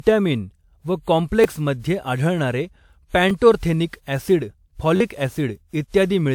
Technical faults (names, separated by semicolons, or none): generation loss; repeated buffer